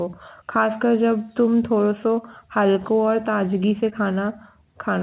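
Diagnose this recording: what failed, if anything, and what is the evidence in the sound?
Short concealed packet loss on the network at 3.90 to 3.94 s: a brief smear where the receiver extended the preceding speech across the gap, unlike a dropout's silence or click.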